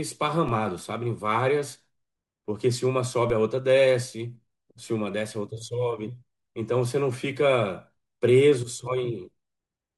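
Speech, with two DC steps at 0.49 s and 3.30 s. Each time the waveform's zero line jumps abruptly by about -25 dBFS, as when a converter recalibrates or an offset input is switched in, and that produces a brief low thump while the speech carries on unaffected. On a waveform the trace shifts off centre and then sags back as a 20 Hz high-pass drains the offset. A spectrogram shows a thin vertical broadband line with energy pooled at the lowest frequencies.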